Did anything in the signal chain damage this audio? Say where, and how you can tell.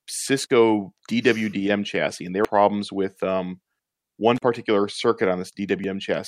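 Yes, two stages. Analogue wiring first: there's an intermittent contact at 0.44 to 0.50 s and again at 4.36 to 4.42 s. The sound drops out for about 39 ms and 37 ms, with crackle at each edge where a loose plug or cable opened and reconnected.

Then the codec, or the stored stream feeding it: damaged data in the compressed stream at 2.45 to 2.48 s and 5.84 to 5.87 s. Each is a roughly 32 ms blip. Corrupted bytes made the decoder misread those frames and lose sync until it found the next good frame header.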